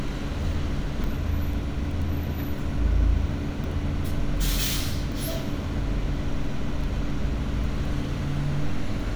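Samples were likely being overwritten before the program read them, a dropped buffer (overrun), so pieces vanish and the sound jumps ahead at 1.04, 3.64, 5.12 and 7.64 s. Each skip is a few tens of milliseconds, except about a tenth of a second at 5.12 s.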